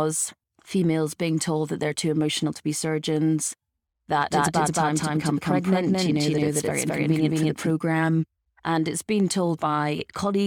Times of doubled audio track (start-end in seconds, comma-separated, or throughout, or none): 4.30-7.70